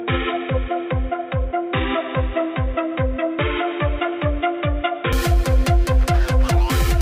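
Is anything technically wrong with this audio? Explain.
Yes. From 0.0 to 5.13 s, the input likely switched to a poorer device. Nothing above 3.8 kHz passes, so the sound is dull and quieter.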